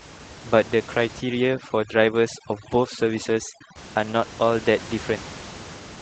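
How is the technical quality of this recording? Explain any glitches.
The quality is compromised by two faults: low-rate speech coding throughout, and heavy noise removal in the early middle.

The Opus voice compression runs from start to finish. Opus is in hybrid mode: linear prediction codes the band below 8 kHz, and a transform layer adds the top. The damage fits about 16 kbps in 20 ms frames. The speech sounds muffled, slightly hoarse and a little robotic.

Overdone noise removal hits from 1.20 to 3.76 s. The room noise sits about 17 dB below the speech. Over-strong suppression pushes bands near that noise almost to silence, taking quiet speech detail with them. The background turns twinkly.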